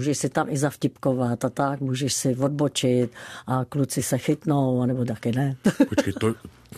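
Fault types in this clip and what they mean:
Corrupt frame decoded: flipped bits in one compressed frame were decoded anyway, misplacing energy across frequencies, giving a brief chirp, squeak, blip or burst of noise near 4.0 s, peaking around -20 dBFS.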